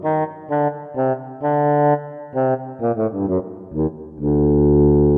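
Nothing stood out as a technical problem on listening.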